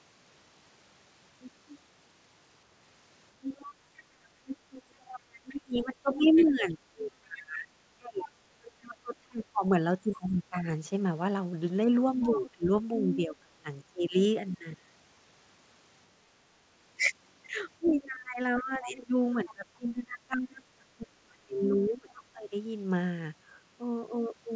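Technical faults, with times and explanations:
3.42–6.43 s, 10.13–10.17 s, 12.21–12.50 s, 17.86–18.62 s, 22.10–22.22 s, other side's voice leaking through: a second voice sits under the talker, about 10 dB below the speech in the longer stretches at 3.42 and 17.86 s, and only a faint scrap about 15 to 25 dB down in the brief bits. Residual loudspeaker echo that the canceller likely failed to subtract would cause this. On a spectrogram it shows as a weaker, overlapping harmonic pattern. In the waveform it appears as low-level energy filling the talker's gaps.
5.11–10.67 s, 11.86–13.69 s, 17.99–22.53 s, speech suppressed in double talk: while the far side is active, the talker's level sinks, falling by about 25 dB in the first two spans and about 30 dB in the third. Around 4 s, 1 s and 4 s of speech are hit in those spans. Both voices overlapping likely made the canceller duck its own talker along with the echo. 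The waveform shows sudden envelope collapses, and the spectrogram shows dark gaps. Within these spans the audio still stops at 8 kHz, which fits a G.722 call path.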